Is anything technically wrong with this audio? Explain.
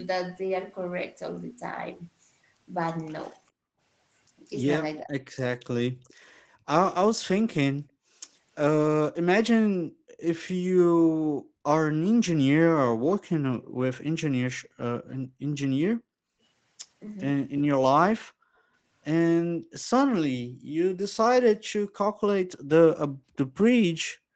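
Yes. This speech clip has three kinds of echo-canceller fault. The band stops at 8 kHz, consistent with an Opus call path at around 20 kbps.

Background gated by the echo canceller occurs at 3.52–3.75 s, 5.92–8.21 s, 9.97–13.11 s, 16.16–16.41 s, and from 19.51 s to the end. While far-end audio played, the canceller clamped the microphone by about 30 dB in the first event and about 40 dB in the rest. The room tone drops out. On a waveform and spectrogram, the noise floor shows abrupt dark gaps.

Speech suppressed in double talk appears at 5.03–5.14 s. For roughly 100 ms the talker's level falls by about 20 dB, most likely because the canceller could not separate this voice from loudspeaker echo while both sides spoke. The waveform shows a short notch in the speech envelope, and the spectrogram dims across the band.

Echo leak appears at 6.08–6.14 s. A faint scrap of the voice returns 402 ms late, roughly 35 dB below the speech. 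This is likely residual loudspeaker echo that the far side's canceller failed to remove. A spectrogram shows a weak, delayed ghost of earlier harmonics.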